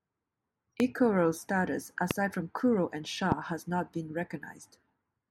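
At 0.80–0.82 s, 2.11–2.13 s and 3.32–3.34 s the speech is hit by a loud pop, each a single sharp click of about 20 ms standing roughly 15 dB, then about 20 dB twice, above the signal, with the speech carrying on underneath; the last falls just before "has not been". A likely cause is a voltage step from a plug, switch or static discharge. On a waveform each shows as a tall spike; on a spectrogram, a thin full-height vertical line.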